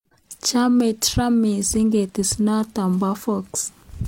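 At 2.09 s the speech gives a tiny skip forward, with about 38 ms missing through 2.13 s. This is an overlap between stream segments: the time stamps of two adjoining pieces of the stream overlapped, so the player discarded the shared stretch as a duplicate even though that audio was not actually repeated. The waveform jumps across the gap. Its position near 2 s fits segments about 2 s long.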